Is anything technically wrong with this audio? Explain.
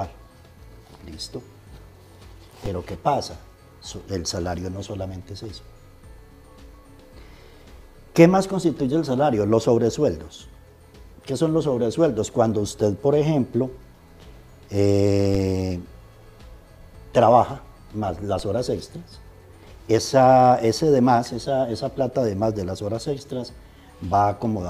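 Yes. Three DC steps occur, at 2.66 s, 15.35 s and 18.39 s: the waveform's zero line jumps abruptly, by about -19 dBFS at the first two and about -22 dBFS at the third, then decays back as a 20 Hz high-pass bleeds the offset away. Each lands as a low thump while the sound continues unchanged. The waveform shows a sudden baseline shift easing back to centre, and the spectrogram shows a brief broadband low-frequency smear.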